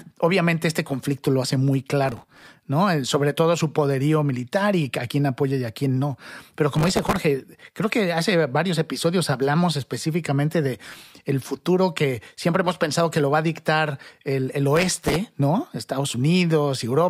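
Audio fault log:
2.03–2.47 s, 6.76–7.20 s, 10.85–11.12 s, 14.76–15.16 s: processor overload crackle. Gritty tearing bursts ride over the speech, the third right after "episodios hablamos específicamente de". Dozens of tiny buffers, a millisecond or two each, missed their deadlines in a row and replayed stale audio with hard edges.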